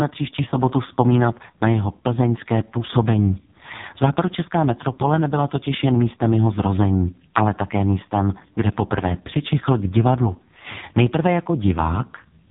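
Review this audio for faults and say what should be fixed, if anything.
Throughout, the speech was squeezed through an AMR narrowband mobile codec at heavy compression, which fits its lowest 4.75 kbps mode. Nothing above 3.8 kHz survives, and the sparse-pulse vocal-tract model makes the voice buzzy and synthetic. Carry the audio over a wideband or higher-bitrate link.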